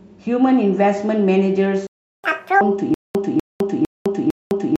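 At 1.87 s the speech cuts off mid-flow and the output stays dead silent until 2.24 s, a playback stall of about 370 ms, likely from the player running out of data. A waveform shows a flat line, and a spectrogram shows a blank vertical band.

From 2.24 s to 2.61 s comes catch-up at higher speed. The player resamples its backlog at twice normal speed, so the speech rushes and its pitch jumps by roughly ten semitones. On a spectrogram the harmonics sit spread far higher, then drop back.

From 2.94 s to the end, a stutter with silent gaps takes over. A 247 ms fragment plays, is followed by 207 ms of digital silence, and then repeats. This happens four times on a 454 ms cycle, likely from the stream stalling and replaying its last buffer. The waveform shows identical blocks separated by flat lines, and the speech that should have played there is lost.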